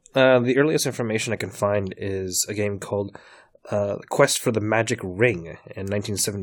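At 3.24 s the speech has a tiny skip from an overlap between stream segments: two segments claimed the same moment, and trimming that overlap removed about 6 ms of real sound, in a stream cut into 4-second segments. Unlike a dropout, no silence is inserted; the waveform simply jumps forward.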